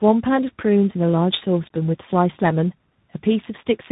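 Speech, with tandem speech coding throughout. Two speech codecs in a row re-encode the already degraded signal. The sound is rough, muffled and warbly. Nothing is present above 3.8 kHz. The artefacts point to a low-rate G.729A-type codec followed by CVSD.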